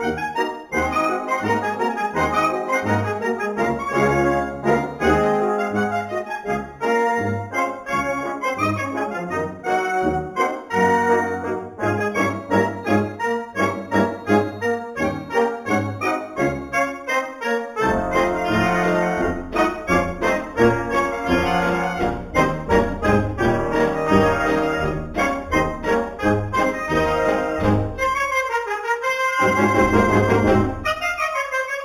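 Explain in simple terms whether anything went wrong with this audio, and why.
The top end sounds dull, and a faint metallic shimmer rides on hissy and high-pitched moments from start to finish. That is imaging from linear upsampling. The audio started at 8000 Hz and was raised to 48 kHz by joining neighbouring samples with straight lines. That crude join softens the highest sounds the recording held and leaves ghostly mirror copies of them between 4 kHz and 8 kHz, where they shimmer.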